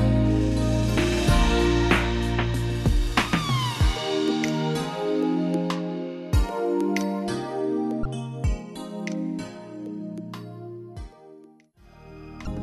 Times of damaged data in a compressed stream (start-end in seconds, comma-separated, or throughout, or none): 8.02-8.05, 12.44-12.49